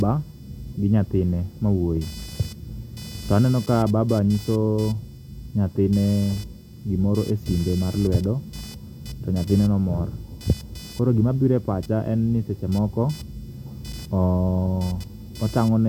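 Speech recording with computer activity noise throughout. A pulsing interference repeats around 500 times a second, roughly 25 dB below the speech. Computer load changes shift the audio circuit's shared ground.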